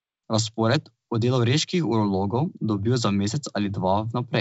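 No audible faults in this clip.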